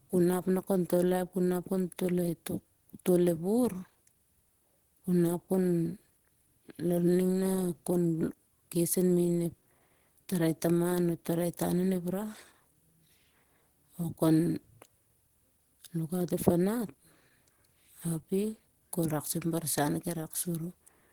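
From start to finish the speech has plainly audible coding damage: hoarse and a bit muffled, with grainy, roughened highs, though content still reaches about 20.2 kHz. That's likely Opus compression in its hybrid speech mode, at a rate that fits roughly 16 kbps.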